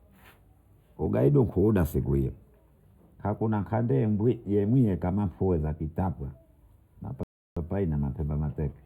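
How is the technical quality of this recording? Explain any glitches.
The recording has two technical faults: a constant tonal coloration from channel delay, and a brief playback stall near the end.

Channel delay (comb filtering), throughout the speech: one channel lags by a few samples, roughly a tenth of a millisecond. Summing to mono cancels evenly spaced frequencies from around 5 kHz, giving a hollow, phasey sound.

Rebuffering stall, 7.23 to 7.57 s: playback ran out of buffered audio, went silent, then resumed exactly where it stopped, adding 332 ms without losing any sound.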